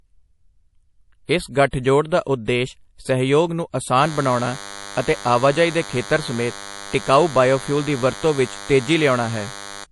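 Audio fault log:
throughout: MP3 compression. Speech sounds watery and swirly with nothing above 11.5 kHz, likely from a bitrate near 48 kbps. The spectrogram shows an empty top band and flickering holes.
1.25–1.29, 1.71–1.73, 2.24–2.27, 2.45–2.48 s: pre-echo. Hiss lasting 23 to 38 ms leaks ahead of attacks because block-wide coding noise fills the quiet moment. The waveform shows a fuzzy smear before each onset.
4.01–9.85 s: DECT cordless phone buzz. A steady, thin 100 Hz buzz sits around 15 dB below the speech, coming from rectified radio bursts every 10 ms. The spectrogram shows evenly stacked horizontal harmonic lines.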